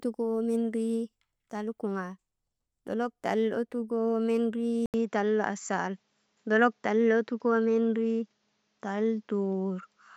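At 4.86 s the speech drops out for 80 ms, then returns duller, with nothing above 7.6 kHz and a new faint noise about 45 dB down, likely an input switched to a poorer device. The gap and changed noise floor distinguish it from simple filtering.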